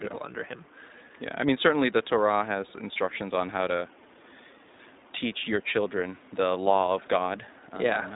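Throughout, the speech carries plainly audible iLBC codec damage. The band stops at 4 kHz, and each 20 ms frame is coded independently, giving a rough, slightly synthetic texture consistent with the 15.2 kbps mode. Room noise sits about 28 dB below the speech.

At 2.94 to 2.97 s, lost iLBC frames cause a brief gap, consistent with a single missing 20 ms frame. The decoder filled it by repeating the last pitch cycle mixed with noise, heard as a short buzzy held vowel, with clean recovery immediately afterward.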